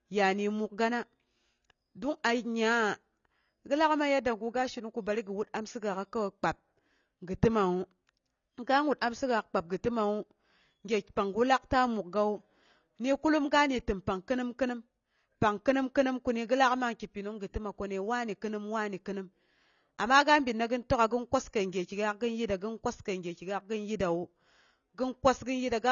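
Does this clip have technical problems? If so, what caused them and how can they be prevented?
Yes. Across the whole speech clip the audio stops dead at about 6.9 kHz, leaving it dull, and the codec damage is plainly audible as a smeared, watery texture with fizzy sibilants. This is likely AAC compression, an AAC-LC encode starved of bits, which fits a bitrate around 24 kbps: the encoder drops the top band and quantises the remaining spectrum coarsely. Encoding speech at 64 kbps or more, or keeping a lossless master, prevents it.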